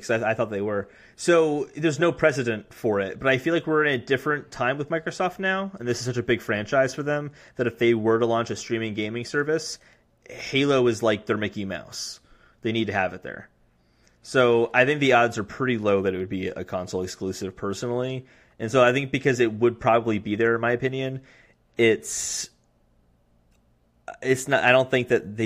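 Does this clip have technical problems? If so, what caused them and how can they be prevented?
No, nothing in this speech recording stands out as a technical problem, so there's no cause to trace and nothing that needs preventing.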